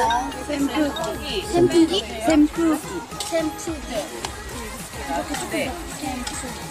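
No technical faults are audible.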